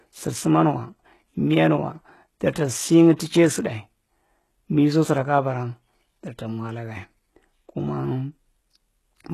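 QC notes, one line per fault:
Throughout: HE-AAC compression. The speech is band-limited, with nothing above about 12.3 kHz, and the upper band sounds synthetic rather than recorded. Sibilants come out gritty and metallic because the treble is being regenerated from copied lower bands under a coarse envelope, so its harmonics do not line up with the real ones below the crossover. The damage is heavy, and the likely cause is HE-AAC v2 at a very low bitrate, around 16 kbps.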